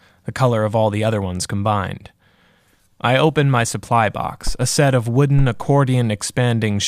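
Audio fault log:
No fault was found in this speech clip.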